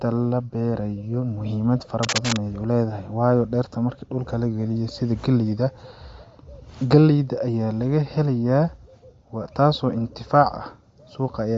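From start to end, the speech carries the sound of Bluetooth LC3 compression, likely from an LE Audio link. Nothing is heard above 7.7 kHz. The codec damage is plainly audible. At this rate the encoder discards much of the upper band and fills gaps with shaped noise. Consonants turn breathy and grainy. Sibilants lose their crispness. The texture points to a low bitrate near 32 kbps, with 10 ms frames.

At 2.03 s, just after "la beerayo muhimad fara", cable scratch noise breaks in and lasts until 2.37 s. It is a dense, ragged burst of crackle and rustle, about as loud as the speech itself. The likely cause is a worn cable or connector shifting. Its contact resistance jumps about rapidly, and each jump adds a spike of noise. For a third of a second, the scratching sits right over the voice.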